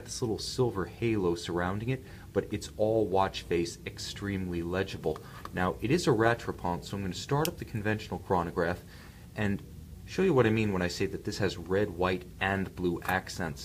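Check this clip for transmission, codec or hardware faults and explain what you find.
Nothing stood out as a fault on listening; no transmission, codec or hardware problem could be heard anywhere in the clip.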